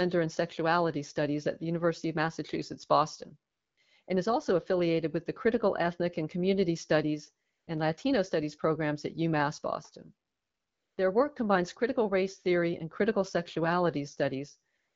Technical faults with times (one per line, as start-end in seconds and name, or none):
3.51-3.77 AMR comfort noise
4.03-4.07 AMR comfort noise
7.49-7.67 AMR comfort noise
10.27-10.97 AMR comfort noise
14.77-14.95 AMR comfort noise